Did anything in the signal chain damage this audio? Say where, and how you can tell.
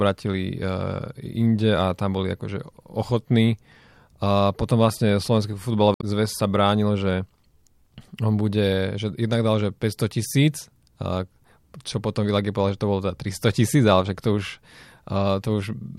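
Yes, there's damaged data in the compressed stream, so the codec stage is at fault. From 5.92 to 6.04 s the speech breaks off briefly. The corrupted bytes made the decoder misread those frames and lose sync until it found the next valid frame header.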